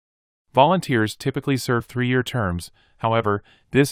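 No technical faults can be heard anywhere in this recording.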